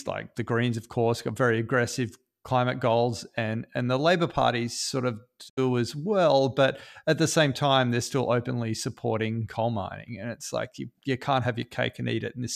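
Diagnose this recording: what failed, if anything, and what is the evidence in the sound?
A digital broadcast dropout in the reception stage breaks the speech between 5.48 and 5.59 s. The audio fades out over about 20 ms into a short mute, and after that it resumes further along rather than where it stopped. About 72 ms of programme is missing, which is consistent with a few consecutive frames failing their checksum. The receiver muted those frames instead of decoding corrupt data, so whatever was broadcast during that gap is not recoverable from this recording.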